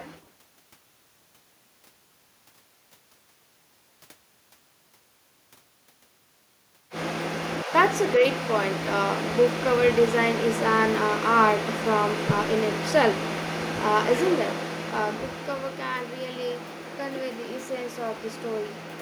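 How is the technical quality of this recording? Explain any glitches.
No glitches can be heard anywhere in this recording.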